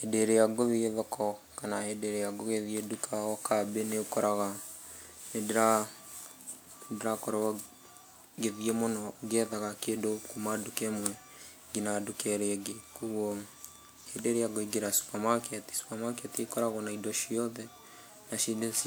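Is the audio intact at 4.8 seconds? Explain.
No, at 4.8 seconds the speech carries generation loss that runs through the whole clip, most likely from around five repeated WMA passes near 128 kbit/s. The requantising leaves it swirly, hollow and blurred on attacks; a spectrogram shows smeared onsets, scattered holes and nothing above 20.1 kHz.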